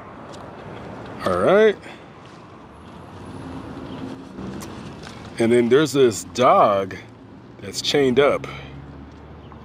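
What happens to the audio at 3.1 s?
Nothing goes wrong at 3.1 s; the audio runs on intact through that moment with no audible fault.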